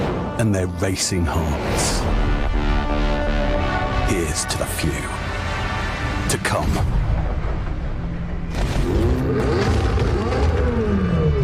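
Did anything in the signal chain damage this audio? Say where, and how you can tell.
Yes: a gritty, inharmonic fizz, roughly 30 dB down, tracks loud and bright passages throughout. This crude rate conversion fits unfiltered linear interpolation from 32 kHz up to 48 kHz.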